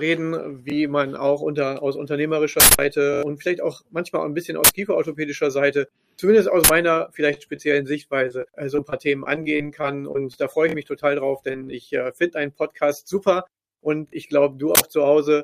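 Short stutters at 0.70 to 0.72, 3.14 to 3.23, 10.69 to 10.74 and 14.08 to 14.13 s, each a tiny slice sounding again with a hard join, are repeated buffer faults: fresh audio arrived late, so the device replayed its last block, about 23 ms long, which fits a 1024-sample buffer. The slice plays twice at 0.70 s, three times at 10.69 and 14.08 s, and five times at 3.14 s, where roughly a tenth of a second of audio is lost. Loud bursts of harsh digital noise at 2.60 to 2.79 s, 4.64 to 4.69 s, 6.64 to 6.69 s and 14.75 to 14.80 s are uninitialised buffer faults: blocks were played before any audio was written to them, so leftover memory came out as samples. The first burst is the longest at about 186 ms, fitting an 8192-sample block, and the others are about 46 ms each, fitting 2048-sample blocks. From 6.93 to 7.60 s and again from 8.28 to 10.36 s the sound turns choppy, which is repeated packet loss giving a robotic sound: holes of up to about 28 ms kept recurring, and each was patched by continuing the previous sound, covering about 10 to 13% of those stretches. 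In the longer stretch about 220 ms of audio is missing outright. Brief smears at 11.52 to 11.56 s and 11.64 to 11.68 s are short concealed packet loss, where about 20 ms of audio each time failed to reach the decoder and was filled in by extending the preceding sound before blending back into the real signal.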